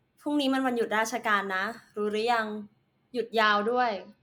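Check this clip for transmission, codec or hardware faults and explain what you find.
One fault is present in this speech clip: a Bluetooth SBC bit pool drop from 3.42 s to the end at 4.23 s. When the link came under pressure, the sender cut the bits per frame. The sound points to the bit pool falling from 31 to 9, which fits a stream near 72 kbps. The top sub-bands lose their share, so treble dulls, and the remaining bands are quantised coarsely, adding gritty noise. Dullness and grit arriving together late in the clip set it apart from a plain low-pass filter.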